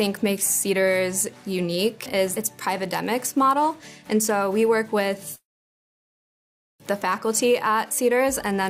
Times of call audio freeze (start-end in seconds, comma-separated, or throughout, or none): 5.35-6.82